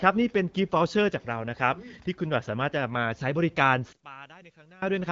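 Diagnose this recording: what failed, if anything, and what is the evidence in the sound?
Between 3.93 and 4.82 s the speech drops by about 24 dB, consistent with one channel inverted, likely a polarity-reversed lead, cancelling in the mono sum.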